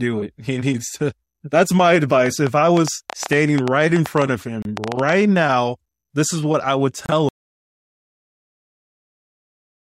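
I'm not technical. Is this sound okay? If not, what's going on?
No. From 2.26 to 5.13 s, between "needs to that's my" and "now this is what", there's a train of clicks: about seven irregular ticks a second, roughly twenty in all, sitting on top of the speech and in its pauses. Unlike a single pop, they repeat with much the same shape. Interference from nearby equipment or a faulty connection or power supply is the likely source.

There are two Bluetooth stalls, brief silences of about 28 ms at 4.62 s and 30 ms at 7.06 s, the second just after "is what I would." Unlike a lasting dropout, each gap is tiny and the speech carries on right afterwards, likely as when wireless headphones briefly run out of audio.

At 7.29 s comes an audio dropout to silence: the sound cuts off mid-flow and stays completely silent, with no background hiss, to the end. Whatever followed is lost, most likely because the input disconnected or was muted while recording continued.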